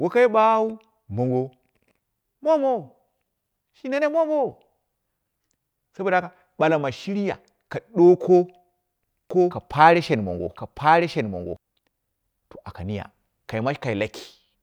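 Speech, and the trouble comes from about 9.31 s to 11.57 s, where you get a doubled audio track: a second, full-band copy of the speech running roughly a second behind the original, a few dB quieter, maybe around 5 dB down. There's no decay or room colour to it, so it's not an echo, and it cuts in and out abruptly. Most likely the audio was picked up twice, once through a slower path, or an edit left two copies out of step.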